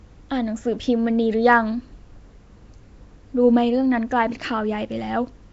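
All the way through, the speech has that rough, hissy, underwater smear of Nellymoser compression, likely Flash's Asao codec at around 32 kbps, with nothing above 7.7 kHz.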